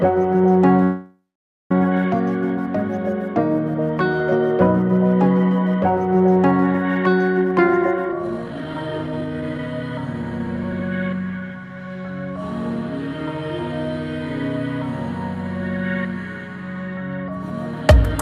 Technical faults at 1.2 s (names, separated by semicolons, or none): call audio freeze